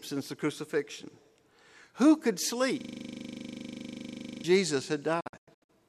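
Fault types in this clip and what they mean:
system hang loop: The computer or its audio driver froze while the sound hardware went on replaying the same small section of its ring buffer. From 2.81 to 4.44 s, a single 40 ms slice of the speech repeats exactly, roughly forty times over. Because the loop comes round 25 times a second, it is heard as a steady, rough buzz rather than a stutter. The speech stops moving forward until the system recovers.
digital broadcast dropout: The receiver lost the digital signal or threw out frames that failed their error check, and it muted the output until clean frames returned. Between 5.20 and 5.70 s, the speech breaks into several short holes, each closed off by a quick fade of 8 ms. About 312 ms of audio goes missing across a 480 ms stretch, and the longest single gap is 96 ms. Whatever was sent during the holes is gone for good.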